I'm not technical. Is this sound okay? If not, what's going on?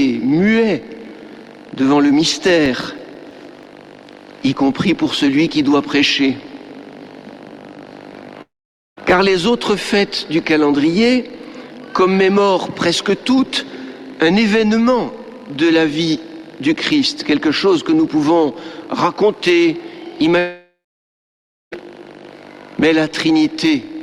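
No, there are two kinds of problem.

First, from 2.33 to 4.12 s you'll hear a quick run of about a dozen tiny ticks, roughly six or seven a second, each only a few thousandths of a second long. These are CD scratch ticks. A mark on the disc spoils the same spot every time it spins round, the player patches over the damaged bit, and each patch comes out as a little click.

Second, there are two gaps where the audio cuts out: from 8.41 to 8.99 s, about half a second lost, and from 20.39 to 21.78 s, about 1.3 s lost. In each one the last bit of sound smears into a fading buzz and then goes quiet, roughly half a second of silence the first time and nearly a second the second time. After that the audio carries on, with that stretch gone. That's most likely a long network dropout, where the connection stopped delivering audio for a moment.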